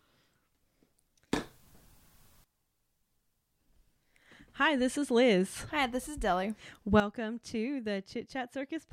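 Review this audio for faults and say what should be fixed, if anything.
Sudden gain jumps: up about 16 dB from 1.32 to 2.44 s, and down about 11 dB from 7.0 s on. Speech and background noise step together, likely an unramped gain change. Ramp every gain change smoothly.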